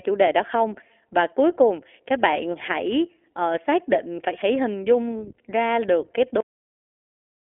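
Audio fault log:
throughout: iLBC codec. Each short block is coded independently from a model of the vocal excitation, so the speech sounds plainly rough and synthetic. The band is narrowed to a telephone-like 300 Hz to 3.4 kHz, with nothing above 3.8 kHz. This fits iLBC's 15.2 kbps mode with 20 ms frames.
6.41 s: cut-off end. The speech stops mid-sound and falls straight to digital silence with no natural decay, then stays silent to the end of the clip. The final stretch of audio was never written out, so the sound is severed rather than fading.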